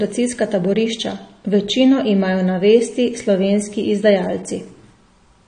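Likely AAC compression at a low bitrate, fitting roughly 32 kbps AAC-LC, affects this speech throughout: nothing is present above 9.5 kHz, so the sound is dull and band-limited, and plainly audible codec damage smears and warbles sustained sounds and sibilants.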